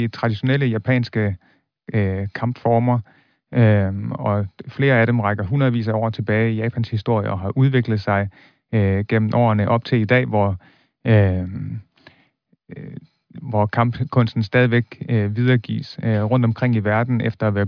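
Nothing technical goes wrong anywhere in this bit of speech, so there's no fault to point to at any moment.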